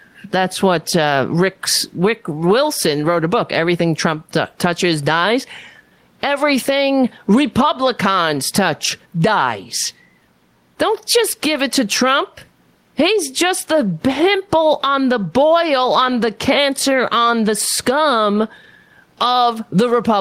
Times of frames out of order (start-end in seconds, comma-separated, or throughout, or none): none